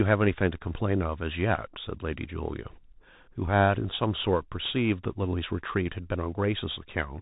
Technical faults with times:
0.00-7.22 Bluetooth CVSD headset codec

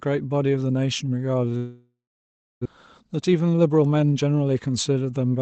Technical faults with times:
1.57-2.67 long network dropout
3.01-4.25 jitter buffer speed-up

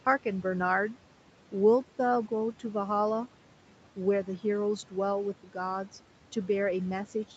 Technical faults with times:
0.00-7.37 noise suppressor artifacts
5.43-5.56 speech cut by the noise suppressor

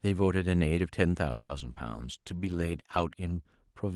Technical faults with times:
1.31-1.51 call audio freeze
1.59-1.78 short concealed packet loss
1.96-3.11 call bitrate drop

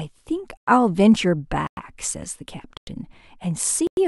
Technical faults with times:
0.57-0.67 gap between chunks
1.67-1.77 gap between chunks
2.77-2.87 gap between chunks
3.87-3.97 gap between chunks

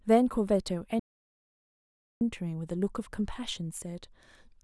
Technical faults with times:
0.99-2.21 playback stall

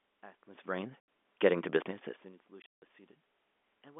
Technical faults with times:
1.00 packet loss filled with silence
2.62-2.82 packet loss filled with silence

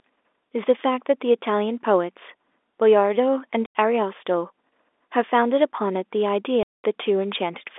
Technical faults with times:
3.66-3.75 packet loss filled with silence
6.63-6.84 packet loss filled with silence

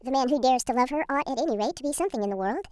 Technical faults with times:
0.00-2.72 wrong sample rate

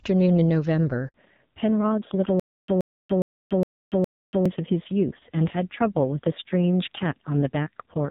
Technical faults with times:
1.08-1.14 handover gap
1.14-8.10 fallback to narrowband
2.40-4.46 stutter with silent gaps

